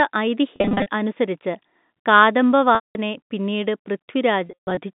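Packet loss with pitch repetition at 0.56 to 0.86 s, 2.75 to 2.95 s and 4.45 to 4.77 s: the receiver replays the last pitch period, giving buzzy held tones that fade to silence in the solid 200 ms middle gap.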